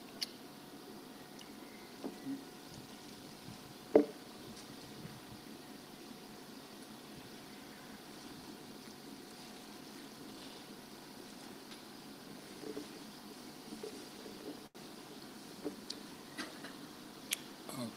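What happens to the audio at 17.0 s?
A jitter buffer speed-up from 16.73 to 17.37 s trims about 70 ms of pitch-period slices, so the audio runs roughly 10% faster at unchanged pitch, sounding hurried.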